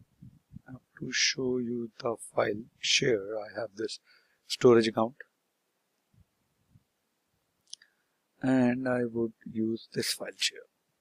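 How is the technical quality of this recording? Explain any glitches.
There is one glitch. At 2.91 s there is an overlap between stream segments. Overlapping timestamps made the player trim about 15 ms of real audio. The waveform jumps, giving a tiny skip.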